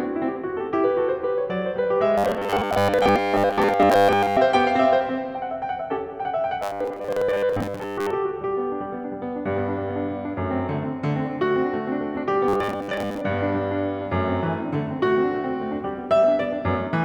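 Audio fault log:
2.18–4.37 s, 6.63–8.11 s and 12.48–13.22 s: robotic sound from repeated short buffers. The music flattens into a rigid metallic buzz at 100 Hz that only loosely follows the original. That's likely a 10 ms chunk looped over and over while most of the real audio gets skipped.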